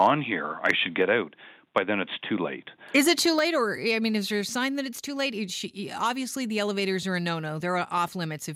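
At 0.00 to 0.07 s and again at 0.66 to 0.71 s the loudest moments crackle and break up, likely microphone overload, with input driven past the converter's limit by about 2 dB and about 5 dB. The waveform shows squared-off peaks, and the spectrogram shows brief broadband smears. At 3.39 s the level drops suddenly by about 4 dB, which points to the microphone volume being stepped down. The waveform envelope narrows in one step, and the whole spectrogram dims from that point.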